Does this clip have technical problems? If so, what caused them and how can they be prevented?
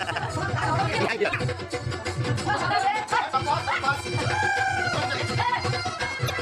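Yes. Damaged data in a compressed stream shows up twice, from 1.30 to 1.34 s and from 6.26 to 6.30 s. In each spot, part of the encoded stream was corrupted, so the decoder misread those frames, lost sync, and had to hunt for the next valid frame header before resuming. The result is a short chirp or blip of about 40 ms. This can be prevented by checksumming the encoded data and sending it over a transport that detects and resends damaged packets.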